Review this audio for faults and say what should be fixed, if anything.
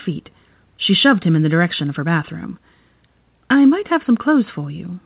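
Nothing to fix: no faults in the speech, and the cut-off at 4 kHz fits a narrowband G.711 mu-law call path doing what it is designed to do.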